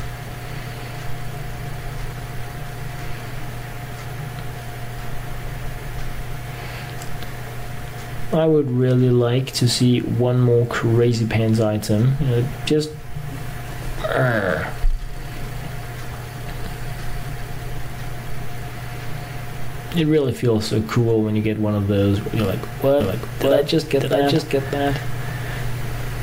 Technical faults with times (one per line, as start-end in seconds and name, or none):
23.00-26.23 doubled audio track